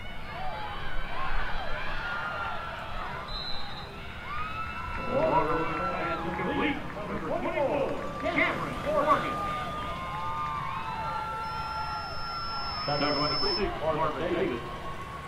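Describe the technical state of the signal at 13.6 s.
At 13.6 s the signal is near the end of a loudspeaker feedback squeal running from 11.43 to 13.69 s. A microphone is picking up the loudspeaker it drives, and around 5.3 kHz the loop gain has risen above unity, so that frequency keeps recirculating and growing. It swells over roughly two seconds into a steady high-pitched squeal that sits about 5 dB above the surrounding sound.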